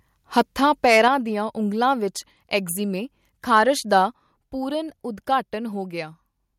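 From 0.38 to 1.07 s the loudest syllables turn harsh and crackly. Their tops sound flattened. This is microphone overload. The input was likely set too high, pushing peaks about 5 dB past the converter's limit. Only a small share of samples is cut. It ends just before "ਦੀਆਂ ਉਂਗਲਾਂ".

Next, the microphone volume is stepped down three times. At 1.08 s, right before "ਦੀਆਂ ਉਂਗਲਾਂ", voice and background drop about 5 dB at once. At 2.1 s, just after those words, they fall about 1 dB more. At 4.14 s they drop about 4 dB further. Each step is abrupt, not a fade. The call software likely cut the input gain in response to the clipping.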